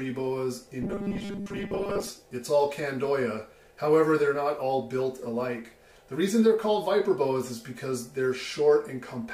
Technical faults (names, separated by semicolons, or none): robotic sound from repeated short buffers